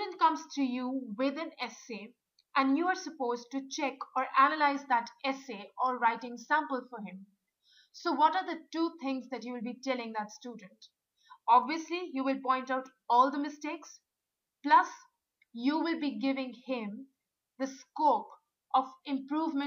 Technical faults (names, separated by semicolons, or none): none